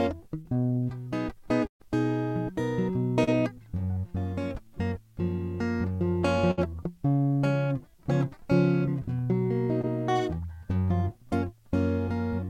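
At 0.41 to 0.47 s there is a short concealed packet loss. About 40 ms of the music never arrived in time. The decoder covered roughly 33 ms of it by extending the sound that came before, then blended back into the real signal. It is heard as a brief smear in the music.

At 1.67 to 1.82 s comes a burst of packet loss. About 140 ms went missing in a row. The receiver stretched the last sound over roughly 130 ms and turned it down until it was gone. About 110 ms of that stretch is near silence. The music then resumes further along, and the passage in between is lost.

At 3.24 to 3.29 s a second short concealed packet loss leaves a similar smear. About 40 ms was lost, and about 34 ms of it was filled.

At 6.51 to 6.59 s a shorter burst of packet loss drops about 60 ms. The held, fading fill lasts about 63 ms before the music picks up later on.

At 9.81 to 9.85 s the last short concealed packet loss covers a gap of about 20 ms. 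It is heard as a quick smear or wobble.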